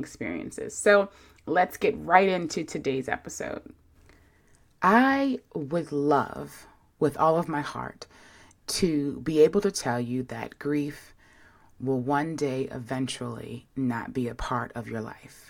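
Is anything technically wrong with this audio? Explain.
No, the speech signal comes through without any audible technical fault, with nothing in it that departs from the level, continuity or frequency content a listener would expect.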